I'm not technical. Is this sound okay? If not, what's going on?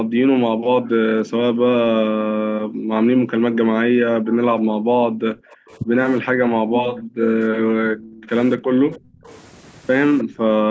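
No. For most of the first nine seconds, from the start to about 9.28 s, the speech keeps dipping, thinning out or dropping away almost to silence, in pieces adding up to about seven seconds. It happens again from 10.24 s to the end. This is speech suppressed in double talk. It is likely caused by both people talking at once, so the call's echo canceller couldn't tell this talker apart from the other side's loudspeaker sound and turned everything down.

You can also hear faint, short ghost copies of the voice arriving about a third of a second late, at 5.5 to 5.77 s, 6.81 to 7.02 s, 7.98 to 8.26 s, 8.92 to 9.38 s and 10.18 to 10.24 s. The last one is the most noticeable. This is echo leak. One side is likely on a speakerphone whose echo canceller didn't remove everything its microphone picked up, so scraps of the voice were sent back down the line.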